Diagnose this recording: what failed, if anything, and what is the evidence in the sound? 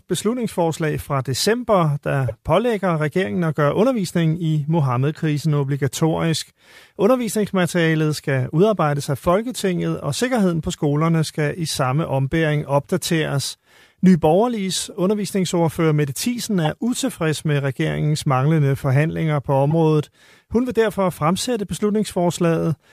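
Codec stage: corrupt frame decoded. Brief chirps, squeaks, blips or bursts of noise at 2.28–2.31, 16.65–16.67 and 19.71–19.73 s. Damaged frames were played anyway, misplacing energy across frequencies.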